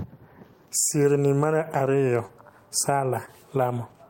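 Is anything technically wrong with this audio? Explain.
Yes, there is short concealed packet loss in this speech at 2.25 to 2.31 s and 3.25 to 3.29 s. Packets arrived too late, so the receiver extrapolated the preceding sound for about 40 ms and 20 ms, giving brief smears. Spectrograms show smooth, stretched harmonics; waveforms show unnaturally repetitive cycles.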